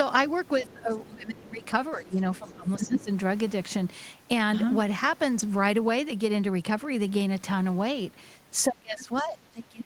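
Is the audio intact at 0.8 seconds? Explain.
No. From 0.62 to 1.63 s the speech dips sharply, by roughly 20 dB at its lowest, across about a second; this is speech suppressed in double talk, likely an echo canceller turning down the talker while the far end also spoke. From 0.68 to 1.09 s a faint second voice sits underneath, around 30 dB below the speech; this is the other side's voice leaking through, likely loudspeaker playback the echo canceller failed to remove from the microphone.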